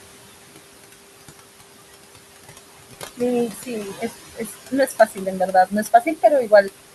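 Throughout the recording, noise suppressor artifacts come from a suppressor pulling down the room noise by about 20 dB. Sitting about 10 dB under the speech, that noise drops away in the gaps and swells back under each phrase.

Speech cut by the noise suppressor follows in three stretches, where the suppressor mistook parts of the speech for noise: 3.5 to 4.14 s (dips of about 15 dB, roughly half a second affected), 4.35 to 6.24 s (about 20 dB, around a second in total), and 6.43 to 6.7 s (about 14 dB, briefly). In those spans, quiet consonants and word endings sound swallowed and faint.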